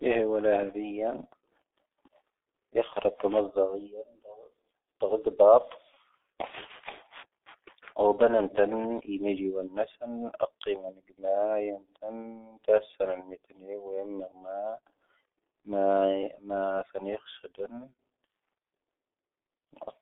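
Across the whole recording the speech carries the signature of the G.723.1 codec. The band is confined to roughly 300 Hz to 3.6 kHz, and the heavy coding damage comes with its rate of about 6.3 kbit/s. The slowly updated vocal-tract model smears consonants and leaves the voice muffled and hoarse. A spectrogram shows a hard ceiling near 3.6 kHz, nothing below 300 Hz, and coarse, blocky formant tracks.

At 2.93 s, lasting until 2.99 s, there is VoIP packet loss concealed by the speech codec. The gap fits a single lost 30 ms frame. The decoder filled it by repeating its last pitch and filter settings at falling gain, so the speech briefly turns into a buzzy tone or coloured noise that fades. On the waveform the envelope sags smoothly rather than dropping to silence. The spectrogram shows a frozen, smeared spectrum across that stretch.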